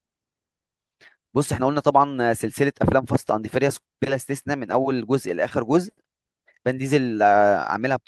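From 0.53 to 1.6 s, a jitter buffer speed-up cuts around 70 ms of pitch periods; speech hurries to 105% at unchanged pitch, unlike resampling.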